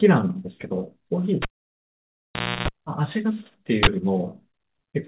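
A speech recording with two faults. At 1.42 s a cable pulled and plugged in produces a pop and 1.21 s of near silence, then a 0.31 s burst of 60 Hz mains buzz as only the tip connects, with a second pop at 2.68 s. From 3.83 to 3.87 s, an uninitialised buffer plays a 40 ms block of loud digital noise from leftover memory read out as samples. Throughout, the telephone-band sound with nothing above 4 kHz fits a call path using G.711 mu-law.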